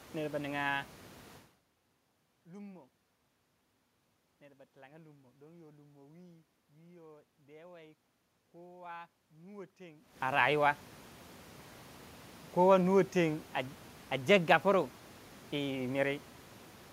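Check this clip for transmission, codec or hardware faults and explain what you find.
No transmission, codec or hardware faults turn up in this speech clip. The room noise sits about 23 dB below the speech, and the level shifts around 1.5 s and 10 s come from the talker moving relative to the microphone.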